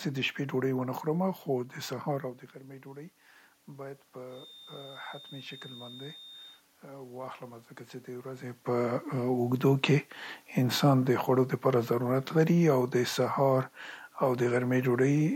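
From 4.26 s to 6.63 s a thin, steady tone near 3.6 kHz sits behind the speech, only a few decibels below it and swelling and fading slowly in level. This is a feedback whistle, most likely caused by the loudspeaker-to-microphone loop running right at its stability limit. At that point one frequency keeps recirculating without building into a howl, so it hangs on as a fixed pitch rather than growing.

Shortly afterwards, from 6.84 s to 9.52 s, the automatic gain rising fault appears. The gain control judged the input too quiet and stepped its gain up gradually, by about 4 dB over more than two seconds. Speech and room noise swell together, which separates it from the talker's own movement near 8.5 s. A change in the talker's distance would alter the voice level without lifting the background.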